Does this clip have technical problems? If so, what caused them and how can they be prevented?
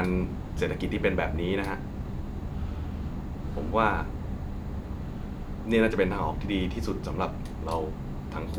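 No, there are no technical problems to report here.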